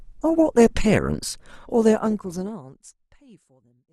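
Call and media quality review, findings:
Adaptive stream starting at a low bitrate: player opened on a low-rate rendition to start fast, switched up once throughput was measured. 0.0 to 2.5 s speech dull, treble missing or synthetic, heavier codec artefacts, fits Opus near 24 kbit/s. Abrupt quality jump at 2.5 s, no gap, sounds like about 64 kbit/s after. The smooth fade-out from around 1.5 s overlaps the later part of the low-rate stretch.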